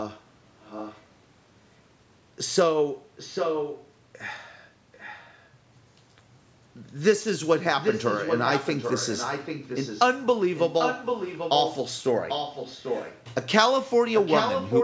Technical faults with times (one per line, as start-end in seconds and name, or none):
0.61-1.02 echo leak
3.16-3.92 echo leak
4.92-5.49 echo leak
7.74-10.01 echo leak
10.56-11.76 echo leak
12.28-13.25 echo leak
14.14-14.84 echo leak